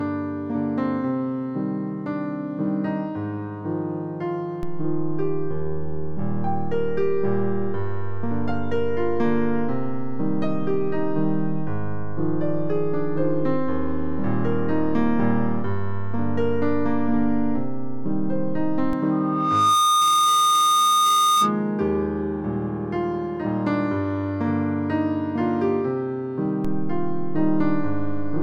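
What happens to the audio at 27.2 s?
At 27.2 s the audio sits inside a DC step that begins at 26.65 s and holds to the end at 28.43 s. The waveform's zero line jumps by about -21 dBFS and stays offset. The jump is heard as a low thump or click. The sound itself carries on unchanged.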